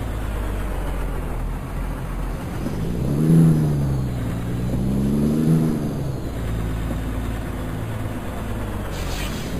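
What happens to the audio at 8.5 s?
At 8.5 s the audio carries imaging from sample-and-hold upsampling, present across the whole clip rather than starting there. Each sample was simply repeated to raise the rate, with no smoothing, which points to an original rate near 11 kHz lifted to 48 kHz. Mirrored copies of the spectrum sit about 26 dB down, the lowest spanning roughly 5.5 to 11 kHz, and they are heard as a bright metallic fizz that swells and fades with the sound. Unlike aliasing, which folds content down into the band, this fizz appears above the old band edge, and its lowest copy moves opposite to the pitch.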